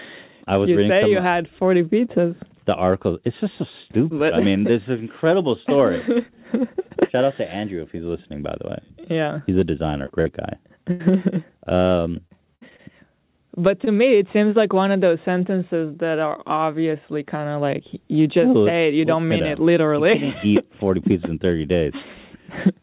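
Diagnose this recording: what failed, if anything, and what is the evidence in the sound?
Short concealed packet loss at the network stage: brief smears at 10.06–10.12 s, 10.22–10.27 s and 13.85–13.89 s, each about 20–40 ms patched by continuing the last sound, too short to fade.

Burst of packet loss at 10.91–11.02 s: about 80 ms missing, heard as a held, dying-away continuation before the audio resumes further on, longer than the smears.

Repeated packet loss (robotic sound) at 12.28–12.81 s: four concealed gaps, the longest 59 ms, covering about a fifth of the stretch and giving choppy sound rather than one isolated patch, all within the call path's band limit at 4 kHz.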